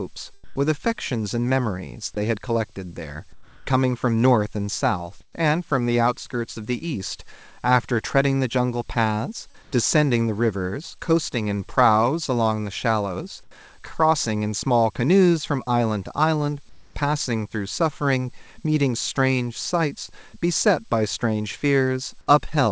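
At 0.44–0.56, 3.33–3.67, 5.21–5.35, 9.51–9.78, 13.43–13.51 and 16.69–16.95 s, the pause background becomes steady, featureless hiss, up to about 6 dB quieter. This is likely comfort noise in place of the background, from discontinuous transmission. On a spectrogram these stretches appear as smooth, uniform noise patches without the texture of the surrounding background.

At 9.51–9.56 s, a short concealed packet loss, about 40 ms of missing audio patched over by extrapolation, smears into a brief wobble. It shows as a smoothed blip in the waveform.

The spectrogram stays empty above 8 kHz throughout, which fits a G.722 call path.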